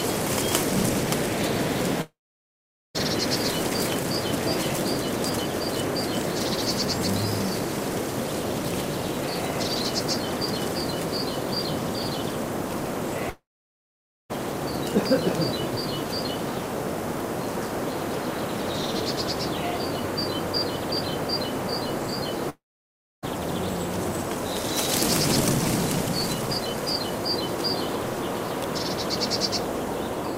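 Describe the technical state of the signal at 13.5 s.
A long network dropout, likely, cut delivery from 13.30 to 14.31 s; the last sound decays into a fading buzz or hiss, then about 0.88 s of silence before audio resumes, with that second lost.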